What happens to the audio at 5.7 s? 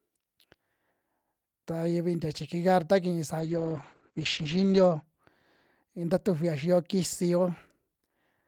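Nothing goes wrong at 5.7 s; the speech there is intact, with no dropout, glitch or other fault.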